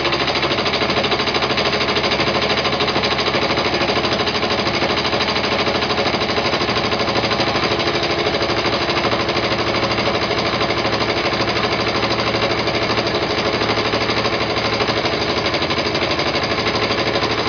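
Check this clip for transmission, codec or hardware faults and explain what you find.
No transmission, codec or hardware faults can be heard anywhere in the clip. Nothing in the audio calls for a fault to be traced.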